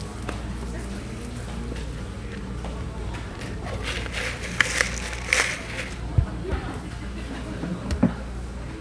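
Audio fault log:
Nothing to log here: I listened all the way through these sounds and didn't catch a single fault.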